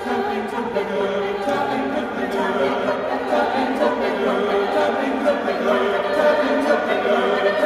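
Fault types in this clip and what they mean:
No fault types are present in this clip.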